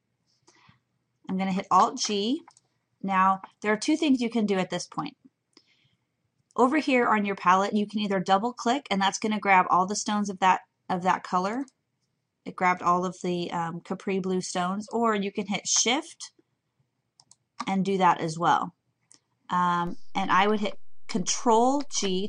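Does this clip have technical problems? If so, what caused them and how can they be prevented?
Yes. A DC step occurs at 19.87 s: the waveform's zero line jumps by about -33 dBFS and stays offset until the clip ends at 22.29 s. The sudden shift of the baseline is heard as a low thump at 19.87 s, while the sound itself goes on unchanged. This sets it apart from a dropout or a damaged-sample click, because nothing is lost or distorted. Only the centre line moves, and it holds rather than decaying. Such a step comes from a converter recalibrating or from an input with an offset being switched in mid-recording. To prevent it, avoid switching inputs or triggering converter recalibration while recording, and keep a high-pass or DC-blocking filter in the signal path.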